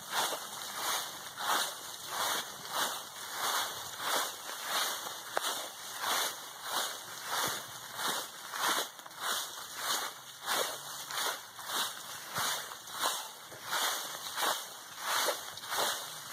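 No technical faults occur anywhere in the audio, so there are none to describe in time order.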